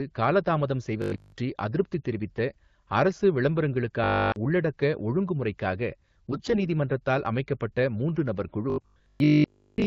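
From 1.02 to 1.36 s, and again from 4.04 to 4.36 s just before "உள்ளடக்க ஒழுங்குமுறைக்காக", the sound turns into a rigid metallic buzz at 50 Hz. This is robotic sound from repeated short buffers, likely a 20 ms chunk looped in place of skipped audio.

From 6.31 to 6.58 s, between "உள்ளடக்க ஒழுங்குமுறைக்காக" and "நீதிமன்றத்தால் அமைக்கப்பட்ட மூன்று நபர்", the voice goes hoarse, scratchy and gargly. These are AMR bit errors: roughly one bit in ten arrived flipped in the AMR-WB frames, misplacing excitation pulses and skewing fine parameters.

From 8.70 to 9.86 s, after "நீதிமன்றத்தால் அமைக்கப்பட்ட மூன்று நபர்", the same 50 Hz robotic buzz returns.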